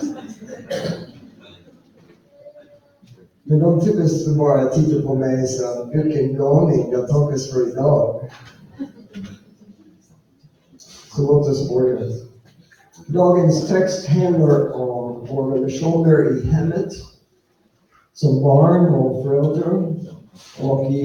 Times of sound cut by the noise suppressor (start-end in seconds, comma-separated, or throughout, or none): 0.14-3.49, 8.17-11.16, 12.27-13.09, 17.02-18.17, 20.20-20.60